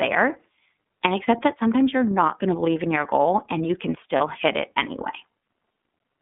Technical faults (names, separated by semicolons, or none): iLBC codec; lost iLBC frames